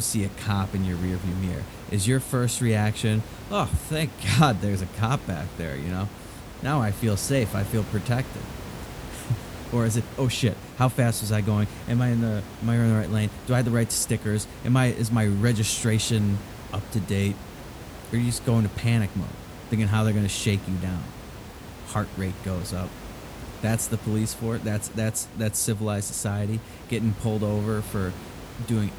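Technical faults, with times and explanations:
Nothing technical goes wrong anywhere in this speech recording; there's just the room's own background sound sitting about 15 dB under the talking, which belongs to the space rather than the system.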